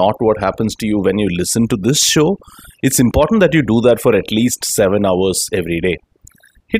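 Throughout, overdone noise removal has gated quiet frequency bands away, leaving speech over near silence with twinkling specks; a spectrogram shows scattered isolated bins.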